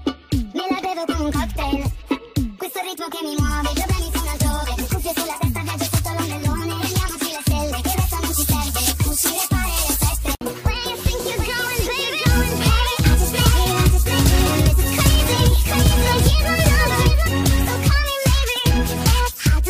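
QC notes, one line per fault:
11.20–17.28 s, doubled audio track: a dry, full-band second copy trails the original by roughly 0.7 s at around 5 dB lower, with no decay or room colour, starting and stopping abruptly. Likely a slower second capture path or an edit holding two out-of-step copies.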